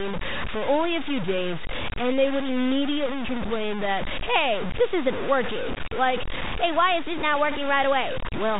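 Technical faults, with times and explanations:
Throughout, low bit depth without dither: gritty distortion sits only about 10 dB under the speech and tracks it, likely from truncation to around 4 bits over the telephone band.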